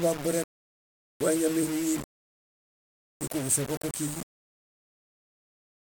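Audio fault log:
Throughout, low bit depth without dither: the speech carries a coarse, grainy distortion that shifts with each sound, roughly 15 dB below the signal. Quiet passages turn gritty and sputter. This likely comes from rounding to about 4 bits without dither, so the error tracks the waveform.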